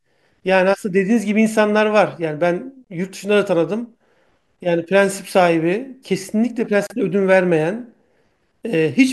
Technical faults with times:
2.84-2.87 gap at a join of encoded pieces
6.87-6.90 gap at a join of encoded pieces

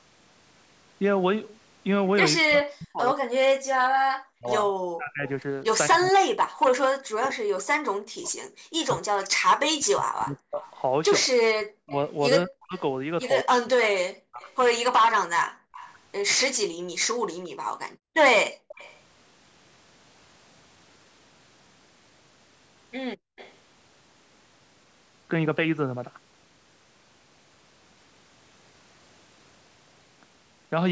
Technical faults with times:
2.39-14.42 speech suppressed in double talk
5.28-19.00 echo leak
8.53-8.64 background gated by the echo canceller
15.49-18.68 background gated by the echo canceller
23.17-23.36 background gated by the echo canceller
23.36-23.54 echo leak

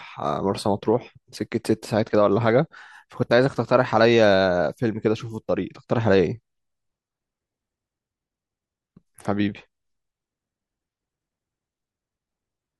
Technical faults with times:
none

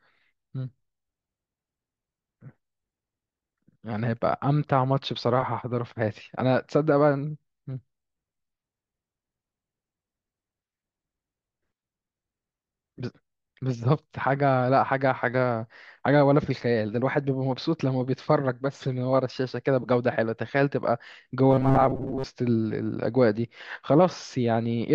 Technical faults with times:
21.50-22.26 robotic sound from repeated short buffers

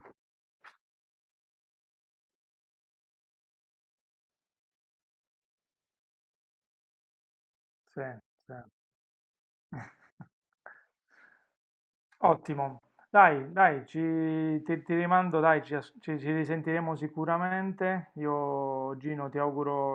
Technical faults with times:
9.83-15.97 call bitrate drop

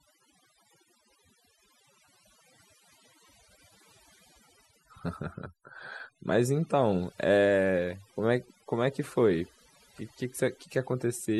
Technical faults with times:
0.00-11.40 overdone noise removal

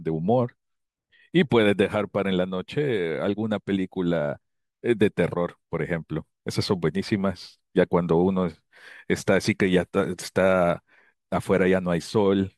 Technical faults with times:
none

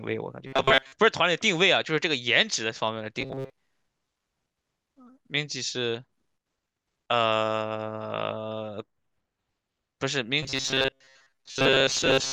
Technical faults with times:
0.47-0.92 robotic sound from repeated short buffers
3.20-3.50 robotic sound from repeated short buffers
10.43-12.33 robotic sound from repeated short buffers

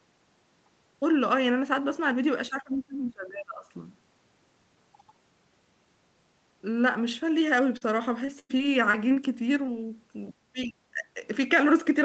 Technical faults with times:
2.49-3.65 speech suppressed in double talk
7.77-7.83 short concealed packet loss
8.25-9.18 repeated packet loss (robotic sound)
9.66-9.69 short concealed packet loss
10.32-11.20 speech suppressed in double talk

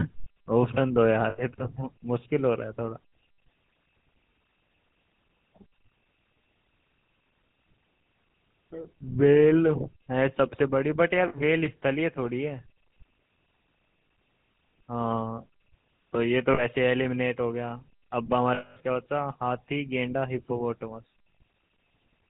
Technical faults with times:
0.00-22.29 GSM full-rate codec
1.30-1.40 lost GSM frames
11.28-11.35 lost GSM frames
16.54-16.65 lost GSM frames
18.54-18.77 lost GSM frames

